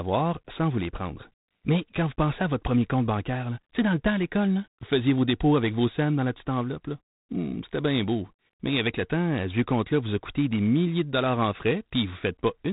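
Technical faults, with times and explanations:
Throughout, G.726 ADPCM: the speech carries a harsh, rasping hiss that rises and falls with its loudness, and nothing above 3.9 kHz survives. Each sample is coded as a coarse step from a predicted value, and this much grit fits the 24 kbit/s rate.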